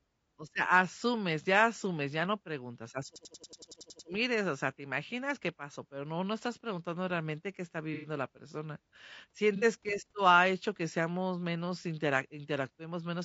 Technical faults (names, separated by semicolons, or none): low-delay AAC compression; system hang loop; AAC frame loss with concealment